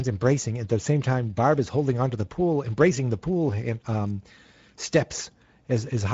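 Throughout, the speech carries Speex codec damage. The excitation is underfed, so it sounds noisy and hoarse. Nothing lies above 7.7 kHz, which points to a middle wideband setting.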